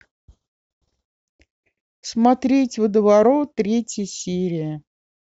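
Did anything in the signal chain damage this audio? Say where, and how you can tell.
No, nothing damaged this audio.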